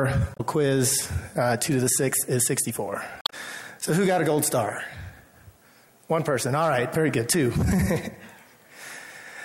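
Damaged data in a compressed stream shows up twice, at 0.33–0.40 s and 3.21–3.33 s: brief glitches where the decoder misreads corrupted frames and hunts for sync again.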